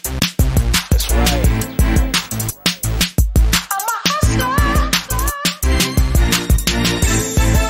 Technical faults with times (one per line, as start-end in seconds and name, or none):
1.03-3.04 video or display buzz